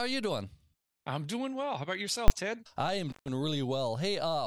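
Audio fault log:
2.28–2.30 s, invalid numbers at full scale: a single hard bang cuts through the speech, a flat-topped burst lasting 20 ms with no speech under it. A calculation in the processing chain returned infinite or invalid values for one 20 ms block, and those were clamped to the largest positive or negative sample. The block sits flat at one extreme value, far beyond the speech peaks. Because the block is so short, its loud onset and release merge into one bang.
3.10–3.28 s, intermittent contact: the speech drops out abruptly with a crackle on either side, and for about 137 ms only faint hiss remains before the sound snaps back with more crackle. A loose plug or cable briefly lost contact, breaking the signal path. The crackle is the contact scraping as it opens and recloses. The hiss in between is the noise floor of whatever remained connected while the line was open.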